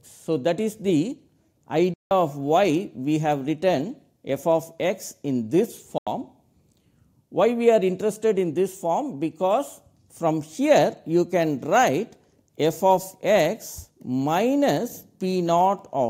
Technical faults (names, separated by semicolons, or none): Bluetooth dropout